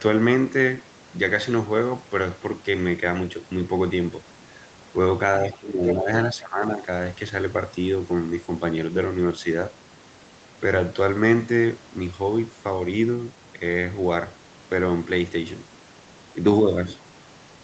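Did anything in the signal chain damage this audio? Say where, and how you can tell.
Yes. The speech dips by about 10 dB at 5.4 to 6.08 s and about 15 dB at 6.32 to 6.81 s. This is likely speech suppressed in double talk by the call's echo canceller.

A brief second voice, only slightly quieter than the speech, surfaces at 5.87 to 5.95 s. This is likely the other side's voice leaking through from the loudspeaker, past the echo canceller.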